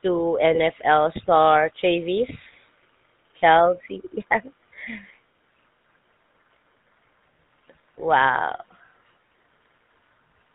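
From the start, the speech carries a plainly audible GSM full-rate codec character. The codec rebuilds the voice from a vocal-tract model excited by regularly spaced pulses, so the sound takes on a buzzy, gravelly roughness. Nothing above 4 kHz survives, which leaves the top end dull and band-limited. The coding rate fits 13 kbps full-rate GSM, and the coarse excitation is what produces the grainy texture throughout.

From 0.54 to 0.59 s, GSM bit errors break through for a brief stretch. Corrupted bits reach the decoder and upset its filter, pitch and gain parameters. The damage lasts about two frames' worth of time, which fits a heavy error rate of nearly 3 percent on a weak link. The voice briefly collapses into a squawking, gargled burst before the decoder recovers.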